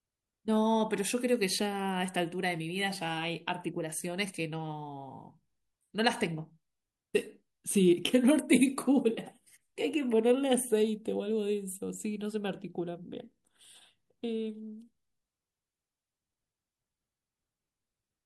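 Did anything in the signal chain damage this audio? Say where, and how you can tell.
No, nothing in the signal chain damaged this audio.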